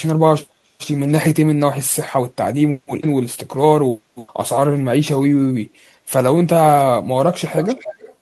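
From 7.55 to 8.15 s, a faint copy of the speech trails 304 ms behind. This echo leak is likely loudspeaker sound an echo canceller missed.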